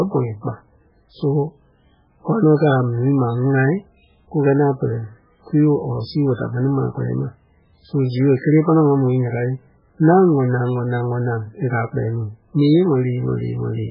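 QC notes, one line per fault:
Throughout, MP3 compression: the speech has nothing above 5.2 kHz and a watery, swirly texture, with s sounds chirping metallically and consonant attacks smeared. The encoder was likely starved of bits, which fits a very low bitrate around 8 kbps, so it chopped the treble and let weak frequency lines flicker between frames.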